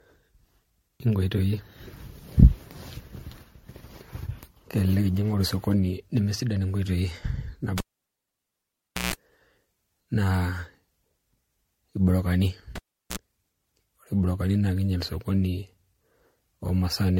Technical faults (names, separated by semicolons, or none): generation loss; cable pulled and plugged in